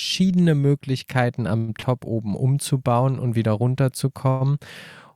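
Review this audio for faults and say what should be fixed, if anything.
Call audio freeze at 1.57 to 1.71 s and 4.30 to 4.43 s. Each time the sound stops moving and the last moment is held as a fading sound for about 106 ms. Playback then resumes where it left off, adding delay. Nothing is lost. Late packets likely emptied the jitter buffer. A larger adaptive jitter buffer would prevent this.

Short stall from a late packet at 1.80 to 1.86 s. One packet arrived late. The receiver stretched the last sound for 27 ms, giving a brief held sound. Audio then continued from the same point, adding 27 ms of delay. More jitter buffer headroom would absorb this delay.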